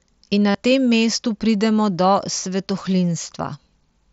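At 0.51 s, voice packets between the headset and the phone stopped arriving for about 37 ms, which fits a short run of roughly five lost mSBC packets, and the receiver filled the gap by repeating the best-matching stretch of the audio it had just received. This is concealed Bluetooth headset packet loss. Until 0.55 s the speech turns into a buzzy, steady tone held at full level, then gives a small warble as the real signal returns through the wideband codec.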